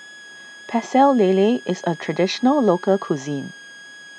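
Speech, with a switching supply whistle running throughout: a thin tone wandering between 1.64 and 1.68 kHz, roughly 25 dB below the speech, drawn as a faint, slightly wavering horizontal line on a spectrogram.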